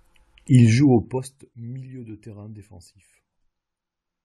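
From 0.81 to 1.47 s, just before "milieu de terrain", a gain reduction of around 20 dB is applied in coarse, unsmoothed increments, roughly seventy per second, rather than as a continuous ramp. Each increment puts a tiny discontinuity into the waveform, so the fading speech carries a fine ticking, zipping texture: classic zipper noise.

Inside that same stretch, at 1.17 s, compressed frames are skipped. The decoder drops about two frames, around 50 ms of speech. The 23.2 ms frame length fits 1024-sample frames at 44.1 kHz.

At 3.40 s a much larger run, about twenty frames, goes missing, so roughly 400 ms of speech vanishes at a single join.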